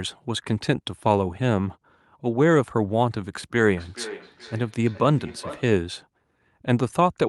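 From 3.64 to 5.82 s the speech comes back as a delayed repeat roughly every 400 ms, peaking about 16 dB below the direct sound. This is feedback echo between two devices: one device replays the other's microphone, which picks it up again, and neither echo canceller removes the other's output.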